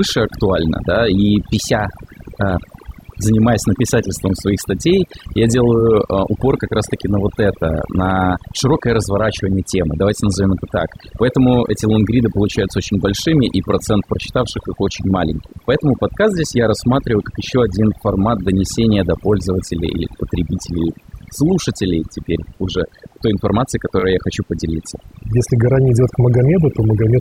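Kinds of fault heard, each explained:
Overdone noise removal: A noise reduction stage was driven too hard, so any frequency band sitting near its noise estimate was pulled down or cut entirely, taking the softer parts of the speech with it. The result runs through the whole clip. Pauses fall to near silence dotted with small twinkling specks.
Repeated frames: A short block of compressed audio was written or delivered more than once, so the decoder played the same slice again before moving on. At 5.79 s a segment of about 20 ms, which points to a single frame, repeats once, adding 20 ms. At 23.99 s a similar slice plays twice more, adding 40 ms. Each is heard as a brief stutter.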